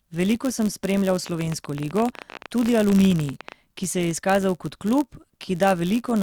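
Right from the start and through the whole speech clip there's a block size mismatch with padding. One stage hands over blocks a little shorter than the next one expects, and the shortfall gets filled with zeros. That tiny gap in every block gives a steady buzz at about 91.5 Hz, the block rate, riding under everything. Because of the padding the audio plays at 0.996 times normal speed. That's only a hair slow.

Then, just after "sem spremljal", a train of clicks starts at about 1.26 s and runs until about 3.53 s. That's around thirty near-identical pops at an average of 14.7 per second, but spaced irregularly, so it sounds like uneven ticking rather than a steady rattle. They peak a few dB above the speech itself. Something is injecting pulses here, most likely interference from nearby equipment or a faulty connection or power supply.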